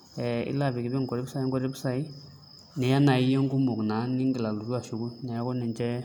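No technical faults are audible.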